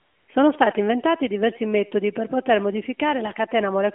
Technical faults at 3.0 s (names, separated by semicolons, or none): none